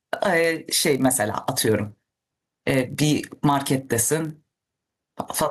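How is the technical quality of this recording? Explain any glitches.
The recording has two technical faults that run through the whole speech clip: gain pumping and a padded block size mismatch.

Gain pumping is audible from start to finish. The gain is pulled down on each loud syllable, with a level swing of about 10 dB. Loud and quiet passages sit closer together than they should, so the delivery sounds squashed. The likely cause is input gain set far too high for the microphone, with a fast limiter or compressor clamping down on each peak and releasing in the gaps. On a waveform, the noise floor visibly rises between phrases and the peaks look flattened to a similar height. A spectrogram shows broadband noise brightening in each gap and dimming under each loud burst.

The block size mismatch (padded) also lasts the whole clip. One stage hands over shorter blocks than the next stage reads, which fits a 1024-sample read block, and the shortfall in each block is filled with silence. 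Those regular dropouts produce a steady buzz at 43.1 Hz over the audio. Playback runs at 0.999 times normal speed, so the slowdown and any pitch change are practically inaudible. A zoomed waveform shows tiny near-silent stretches at evenly spaced intervals. A spectrogram shows thin vertical lines repeating at the 43.1 Hz block rate.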